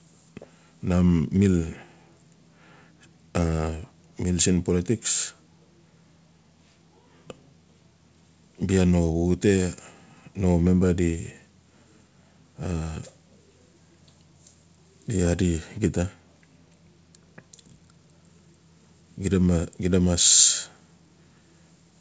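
The speech carries no technical faults; it has come through a call path whose content stops at 8 kHz, which fits the G.722 wideband codec at 64 kbps.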